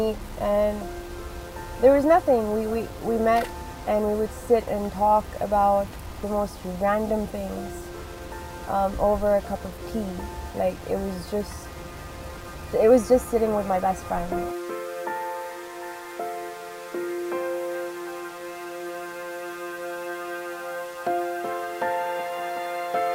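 The sample values were most likely rounded to very few levels without dither, which fits a 7-bit signal. This low bit depth without dither adds signal-tracking grain only about 25 dB down from start to end, turning quiet passages gritty.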